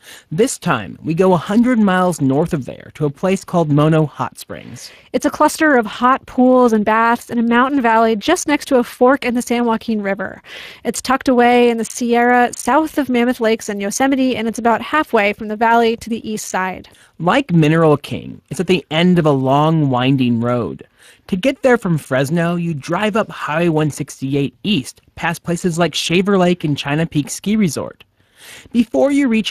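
From start to end the speech carries Speex codec damage, and it's plainly audible. Speex is a CELP coder, so it rebuilds speech from a predicted vocal-tract filter plus a coded excitation, and with a limited bit budget that excitation comes out rough, giving the audio a noisy, hoarse edge. The damage level fits a setting somewhere around 22 kbps. There's also nothing above 15.3 kHz, so the top end just stops there.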